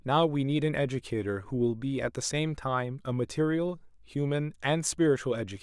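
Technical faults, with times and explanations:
No technical faults heard.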